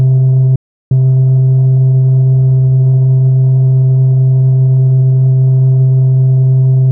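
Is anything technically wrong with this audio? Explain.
Yes. From 0.56 to 0.91 s the music suffers a digital broadcast dropout: the receiver muted after losing frames, fading out within 3 ms. The waveform flatlines and the spectrogram shows a blank vertical gap, with about 0.35 s of music lost.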